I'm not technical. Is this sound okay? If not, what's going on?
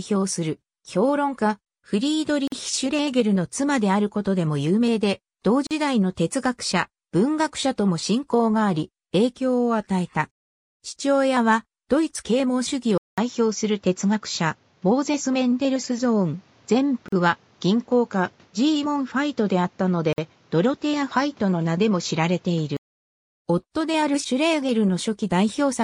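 No. Four times the sound briefly drops out: at 2.48, 5.67, 17.08 and 20.13 seconds. Each silence lasts about 40 to 50 milliseconds, then the sound picks up where it stopped. This is a gap at a join of encoded pieces. Separately processed pieces were stuck together, and each join kept a little silence.

At about 12.98 seconds there is a short silence, about 200 milliseconds. After it the sound turns duller, with nothing above 7.6 kHz and a faint new background noise. The loudness stays about the same. This is likely an input switched to a poorer device, such as another microphone. The fuller sound returns at about 22.97 seconds.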